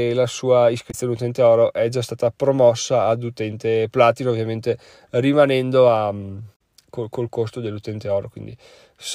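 At 0.88 s, between "la sua" and "utente oro è già", damaged data in the compressed stream garbles the speech for about 70 ms; it happens again at 6.52 s, after "ovviamente rimanendo a mm" and before "col col costo", for about 80 ms. Corrupted bytes make the decoder misread those frames and hunt for the next valid header. On a spectrogram each shows as a narrow vertical band that breaks the speech pattern; the waveform shows a short discontinuity.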